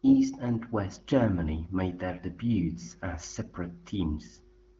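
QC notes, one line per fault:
No faults heard.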